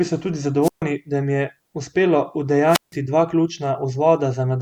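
The radio link from an analogue FM microphone weakens twice, and each time the receiver's squelch shuts the output off. This wireless microphone squelch dropout first runs from 0.62 to 0.83 s, with the speech cut for about 0.14 s, then from 2.67 to 2.96 s, with a mute of about 0.16 s. Each is heard as a short swell of hiss or static, a hole of near silence, and the speech returning.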